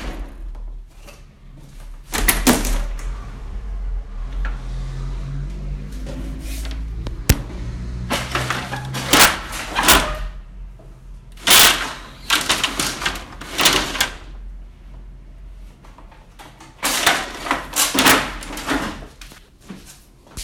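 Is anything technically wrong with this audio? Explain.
Yes, there's integer overflow: 2.29–2.50, 7.30, 9.13–9.25, 9.89–9.95, 11.51–11.67, 13.61–14.01, 17.07 and 17.99–18.12 s. Loud peaks push about 2 dB past the integer limit and, instead of being held there, wrap to the opposite extreme. You hear harsh, violent cracks on the loudest moments, far nastier than ordinary clipping.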